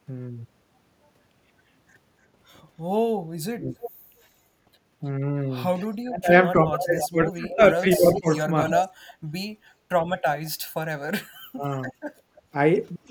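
From 3.45 to 3.79 s the speech is suppressed in double talk, dipping about 40 dB for roughly 0.3 s. This is likely the echo canceller ducking its own talker while the far side speaks, unlike a dropout, which would be a clean gap.

An echo leak follows at 3.81–3.91 s. A copy arriving 306 ms late and about 15 dB down likely slipped past the canceller, and it sounds like a faint repeat rather than reverb.

From 5.94 s to the end, a stronger leak at 311 ms delay and about 10 dB down likely persists.

Double-talk suppression likely recurs at 6.01–8.91 s, with about 1.5 s of dips down to about 25 dB.

At 9.19–9.89 s the background is gated by the echo canceller. The room tone, not the speech, drops about 15 dB for roughly 0.3 s.

Finally, at 11.32–12.54 s, roughly 0.3 s of speech is cut by up to about 35 dB, likely double-talk suppression again.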